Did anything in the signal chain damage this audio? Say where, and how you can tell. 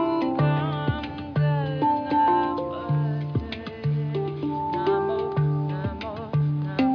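No, nothing in the signal chain stood out as damaging this audio on listening.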